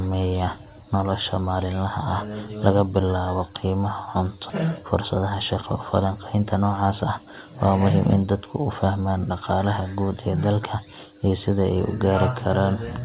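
At 4.5 s the speech jumps abruptly forward with no gap, and the two sides meet almost seamlessly. This is a skip ahead: roughly 0.7 s of audio never plays, either lost in transit or discarded by the jitter buffer when it overflowed, and playback resumes with the later audio that was already queued.

Right after, from 4.64 to 5.23 s, the speech sounds slightly rushed at unchanged pitch, running about 6% fast. It happens again from 6.05 to 7.34 s at about 7% fast, ending just before "waa muhiim". This is jitter buffer speed-up. Too much audio had accumulated, so the receiver repeatedly removed tiny pitch-period-length pieces to reduce the delay. Only a few hundredths of a second are removed in the first stretch and around a tenth of a second in the second. Throughout, nothing is heard above 4 kHz, which fits a narrowband G.711 A-law call path.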